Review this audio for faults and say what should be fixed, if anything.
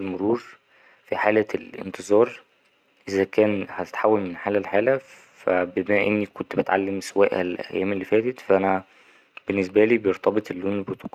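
No faults can be heard in this speech recording. Nothing needs to be fixed.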